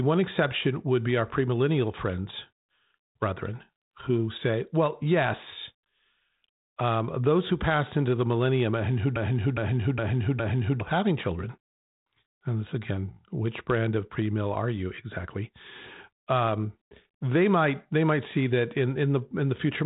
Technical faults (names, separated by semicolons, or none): broken-record loop